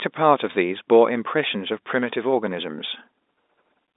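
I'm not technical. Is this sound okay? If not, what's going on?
Yes, nothing has gone wrong in this speech recording. It has the narrow, slightly boxy sound of an ordinary landline call, because G.711 telephone coding keeps only the middle range of sound, roughly 250 Hz to 3.7 kHz, which is normal for a phone line.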